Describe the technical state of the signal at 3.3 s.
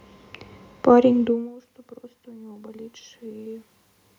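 At 3.3 s the signal is inside a stretch of automatic gain rising, from 1.11 to 3.71 s. After the level fell by about 24 dB, the gain control gradually raised its gain by about 7 dB. Voice and room noise swell together, which distinguishes it from the talker moving around 1 s.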